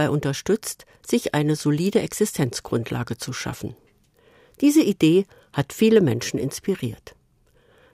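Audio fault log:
No technical faults can be heard in the signal at any point.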